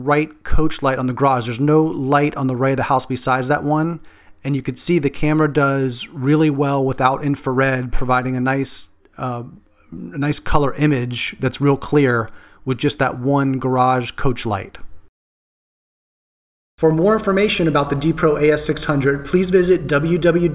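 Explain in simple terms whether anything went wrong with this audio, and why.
Nothing went wrong here: no dropouts, glitches, distortion or level problems anywhere in the recording.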